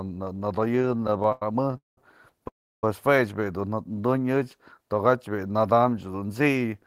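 Speech, with four network timing faults. From 0.75 to 1.98 s there are repeated stalls (stutter). The sound keeps catching and restarting, 22 times across that stretch. Packets were arriving late, so the jitter buffer kept running empty. Each time, the receiver stretched out the last sound until audio came again. About 488 ms is filled this way, 40% of the span. The longest single hold lasts 199 ms. Nothing is lost, but the speech drags and stutters. From 2.48 to 2.84 s the audio stops dead for 348 ms. This is a call audio freeze. The last sound carries on briefly, then 320 ms of it is silence. The likely cause is packets held up in transit until the buffer drained. The speech then resumes where it stopped. Nothing is missing, but a gap now sits in the middle and everything after it is 348 ms later. Just after "bi'i dun", from 3.88 to 4.07 s, comes a jitter buffer slow-down. The buffer was short of audio, so the receiver repeated single pitch periods to build a reserve. 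That adds 39 ms and plays the passage at 84% speed. The pitch stays the same, but sounds are drawn out. From 5.86 to 6.73 s there is a jitter buffer speed-up. The buffer held more than it wanted, so the receiver cut out small pieces of pitch periods, many times in a row. About a tenth of a second is removed. The speech runs at 111% speed at the same pitch and sounds hurried.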